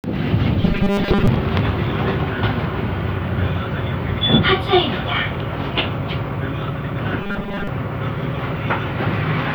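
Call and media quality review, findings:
Robotic sound from repeated short buffers, 0.62–1.28 s and 7.20–7.67 s: rigid metallic 200 Hz buzz over the sounds. Likely starved playback buffer looping about 5 ms chunks, most real audio skipped. Spectrogram: evenly spaced 200 Hz harmonic comb; waveform: identical repeating cycles.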